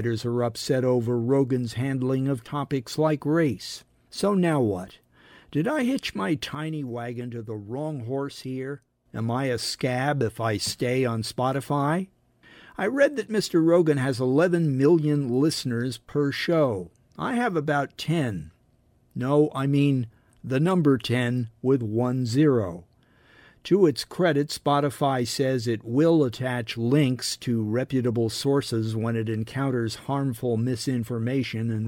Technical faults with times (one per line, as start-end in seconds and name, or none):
6.55-9.06 sudden gain jump